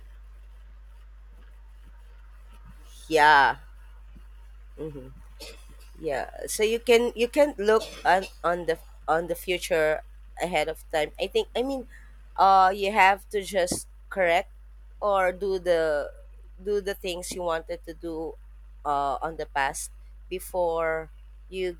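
Mains hum runs under the speech from start to finish. It is a steady low tone at 50 Hz, with some low harmonics above it. A ground loop or nearby transformer has leaked the power line into the signal. The hum sits about 20 dB below the speech.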